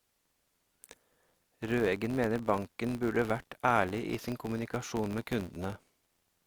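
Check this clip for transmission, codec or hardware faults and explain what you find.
There is one fault, present for the whole speech clip: a filter restarted on every block. Throughout, a steady buzz near 86.1 Hz sits under the speech and rises and falls with its loudness. The filter discards its memory at each block boundary and begins again from silence, so every block opens with a small transient. The repetition rate fits a 512-sample block. Hum also drones at a fixed pitch, but it holds its level in pauses, while this buzz tracks the signal and drops away when the speech does.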